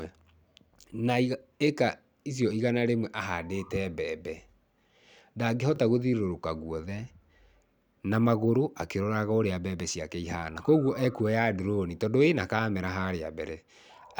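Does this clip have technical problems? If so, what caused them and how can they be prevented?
Yes. A repeated buffer occurs twice in this speech, at 0.82 to 0.84 s and 5.76 to 5.78 s. Each time, fresh audio missed its deadline, so the device replayed the previous 20 ms block once, heard as a tiny stutter or click, and roughly 20 ms of real sound went missing. On a waveform the same 20 ms shape appears twice in a row with a hard seam, and a spectrogram shows a thin vertical stripe at each join. Giving the playback path a larger buffer or higher scheduling priority would prevent these underruns.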